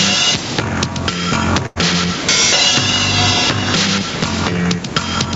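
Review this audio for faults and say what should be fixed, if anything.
Gain pumping runs through the whole clip. The likely cause is an input gain set far too high for the microphone, with a fast limiter or compressor pulling the level down whenever a loud sound arrives. The level swings by around 10 dB. Loud and soft passages end up pressed closer together, so the sound is squashed. To prevent it, lower the microphone gain so the limiter only catches rare peaks.

A burst of packet loss occurs from 1.66 s to 1.78 s. Packets on the Opus call path were lost or arrived too late to be played, and the receiver filled a 93 ms gap by carrying on the last sound and fading it down. About 100 ms of the real audio is missing, so after the held, fading sound the audio resumes slightly further on than where it broke off. The call path cuts off everything above 8 kHz. To prevent it, use a more stable network connection with enough jitter-buffer headroom and forward error correction.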